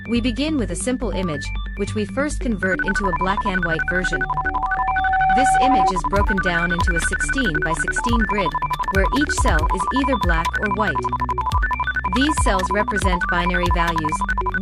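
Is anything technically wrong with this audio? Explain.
Yes. Loudspeaker feedback squeal, 3.75 to 5.93 s: the microphone re-amplifies its own loudspeaker at 761 Hz, swelling over about a second and a half to about 5 dB above the sound, unlike a steady hum.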